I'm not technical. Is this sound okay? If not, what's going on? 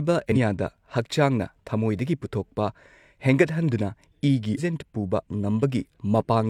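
No. Twice in this speech clip, part of the compressed audio data was damaged, a fault called damaged data in a compressed stream. At those spots the decoder can't make sense of the data, loses its place, and has to hunt for the next readable chunk. Each time you hear a brief chirp, squawk, click or short gap of about 50 milliseconds instead of clean speech, first from 0.32 to 0.37 seconds and again from 4.54 to 4.59 seconds.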